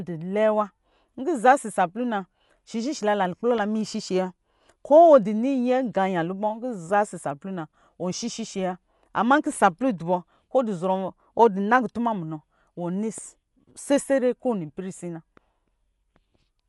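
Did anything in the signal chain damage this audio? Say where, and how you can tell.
Yes, and it's at the codec stage, across the whole speech clip. Nothing survives above about 11.5 kHz, so the sound is dull, and there's a rough, fluttering grain around the voiced parts where the coder has run short of bits. That's likely Dolby Digital compression at a starved rate, something like 64 kbps: the encoder narrows the band and leaves many spectral lines without mantissa bits, and the decoder fills those gaps with dither noise.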